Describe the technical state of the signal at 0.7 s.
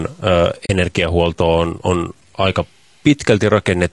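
At 0.7 s the sound is at the tail of an AAC frame loss with muting, a soft-edged hole from 0.65 to 0.70 s. For 40 ms the spectrum was zeroed, which fits two lost frames, and the overlapping windows fade the sound out and back in. That fade separates it from a hard dropout.

Throughout, including this moment, there is gritty, signal-following distortion with an error floor around 40 dB below the signal. This is likely low bit depth without dither, with truncation to about 9 bits. Unlike steady background hiss, the grit tracks the sound and worsens on quiet passages.

Also throughout, the speech carries plainly audible codec damage: a rough, grainy texture with noise filling the gaps between harmonics and an altered top band. That points to low-delay AAC compression at about 32 kbps, AAC-ELD, whose spectral roughness differs from the level-dependent grit of truncation.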